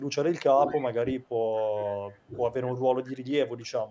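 From 0.52 to 0.68 s the speech sags by roughly 20 dB for about a tenth of a second in all. This is likely speech suppressed in double talk: the echo canceller turned the talker down while the other side was also speaking.

From 0.73 to 0.88 s a faint copy of the speech trails 223 ms behind, about 20 dB below it. This is likely an echo leak: the far end's loudspeaker sound reached its microphone, and the canceller let part of it back into the call.

At 1.02 to 1.06 s a shorter dip of around 15 dB clips the speech again.

The same 223 ms echo returns more quietly at 2.15 to 2.19 s (about 35 dB down), 3.06 to 3.18 s (about 25 dB down) and 3.57 to 3.71 s (about 35 dB down).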